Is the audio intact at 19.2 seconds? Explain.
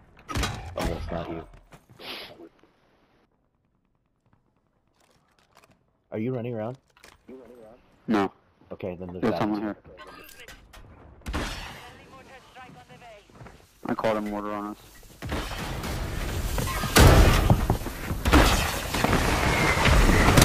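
Yes, the audio is intact at 19.2 seconds, with no fault at that moment.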